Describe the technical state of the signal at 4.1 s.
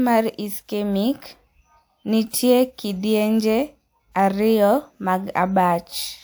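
At 4.1 s the speech signal is intact, with no audible fault at that moment.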